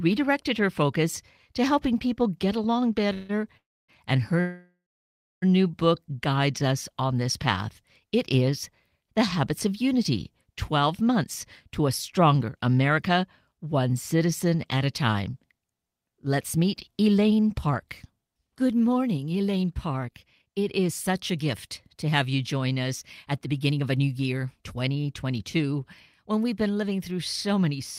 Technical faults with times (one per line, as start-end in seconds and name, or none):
3.13-3.31 call audio freeze
3.57-3.90 call audio freeze
4.40-5.44 call audio freeze
10.77-13.60 jitter buffer speed-up
18.96-21.21 jitter buffer speed-up
22.84-26.92 jitter buffer speed-up